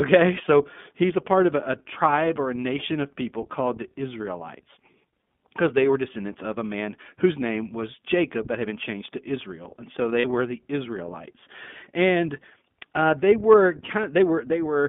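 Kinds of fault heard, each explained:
iLBC codec: throughout, a narrowband band of roughly 150 Hz to 3.5 kHz, with independently coded 20 ms frames leaving plainly audible rough, synthetic speech, which fits the 15.2 kbps mode.
lost iLBC frames: at 2.28 s after "part of a a" (20 ms) and 10.20 s after "and so" (40 ms), the decoder repeats pitch cycles, giving brief buzzy held vowels.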